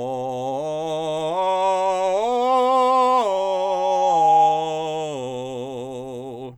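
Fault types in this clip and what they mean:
Loudspeaker feedback squeal: The microphone picks up the loudspeaker it feeds, and one frequency returns louder on each pass. Here a tone near 817 Hz rises from 3.01 s. It swells for about a second and a half. It peaks roughly 10 dB above the music and stops at 4.94 s.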